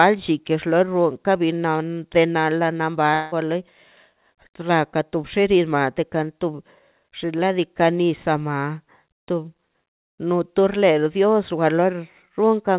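Speech passing through a G.711 call path that cuts everything above 4 kHz contains a likely long network dropout from 3.14 to 3.34 s. About 180 ms of audio never arrived, and the receiver stretched the last sound into a fading buzz for about 176 ms before the speech resumed without the lost part.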